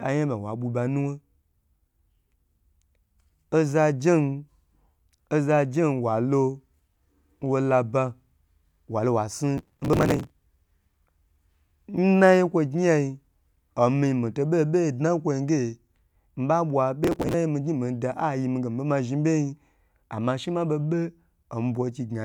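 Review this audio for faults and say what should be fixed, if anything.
Processor overload crackle at 9.58–10.30 s, right after "walo wa snu", and again at 17.04–17.34 s. The CPU kept missing tiny buffer deadlines and skipping them, so it tears. Bigger buffers or less CPU load should fix it.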